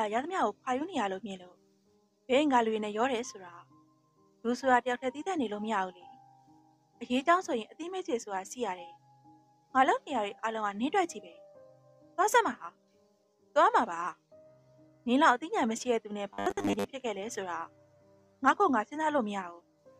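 At 16.33 s there's about half a second, to 16.85 s, of robotic sound from repeated short buffers. The audio collapses into a stiff, metallic buzz locked at 100 Hz, still loosely tracking the sound's shape. The likely cause is new audio arriving too slowly, so playback kept looping the most recent chunk, which fits a 10 ms buffer, and skipped the real material, with most of that stretch made up of repeats.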